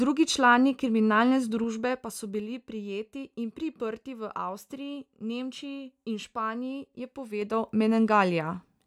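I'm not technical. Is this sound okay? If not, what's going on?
No. The volume was moved in small jumps instead of a smooth slide, causing zipper noise. Each jump clicks, so you hear ticking as the sound drops between "člani kriminalne" and "prijeti in priprti v" (1.45–2.65 s), and faster zipping as it rises at 7.36–7.72 s.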